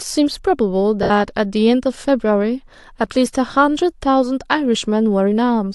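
At 1.03 s the speech breaks up for about 70 ms, until 1.10 s. These are lost LE Audio frames. The gap fits seven 10 ms frames dropping out of the Bluetooth link. The decoder does not go silent. It repeats the last good spectrum with scrambled phase signs, then fades it. So the sound turns into a brief noisy smear that softens before clean audio resumes. The light codec grain around it is likely from LC3 compression.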